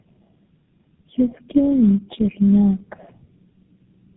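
The speech passed through a chain of tandem speech coding, decoded and re-encoded by about four low-rate speech codecs in turn, and the last stage sounds like GSM full rate. Each coder had to model the artefacts left by the one before, so the errors compound across the whole clip: the speech is rough and noisy, with a warbling, unstable quality, and sounds muffled, with nothing above about 3.7 kHz.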